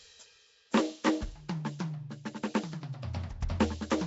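Nellymoser compression, running from start to finish, leaves plainly audible codec damage across the music, and nothing is present above 7.7 kHz. The likely cause is the Nellymoser Asao codec Flash used for microphone input, at a rate that fits about 32 kbps. It codes the audio in 256-sample blocks on a fixed bit budget. Bands too weak to earn bits are replaced with noise, so the spectrum is coarsely rebuilt rather than reproduced.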